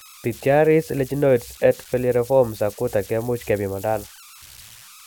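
Throughout the clip, an undithered delta-sigma converter slips into repeating bit patterns whenever the speech level drops, producing converter idle tones: a whistle around 1.5 kHz in the pauses and a grainy hiss under quiet passages, sitting about 24 dB below the speech.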